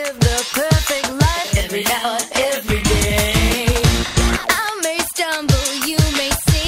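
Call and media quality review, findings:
AAC frame loss with concealment, 4.06–4.16 s: short smeared, phasey patch, about 85 ms, fits two dropped frames. Decoder papered over it from the last good spectrum.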